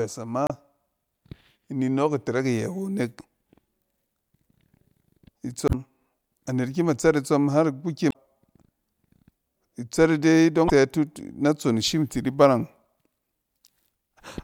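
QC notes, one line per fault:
0.47–0.51 s, 5.65–5.75 s, 8.08–8.14 s and 10.66–10.70 s: damaged data in a compressed stream. Corrupt frames make the decoder lose sync and hunt for the next header, so each spot gives a short glitch.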